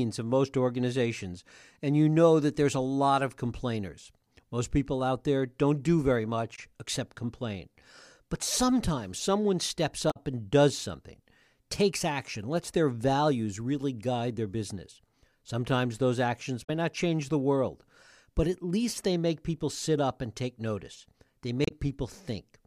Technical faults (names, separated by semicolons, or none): damaged data in a compressed stream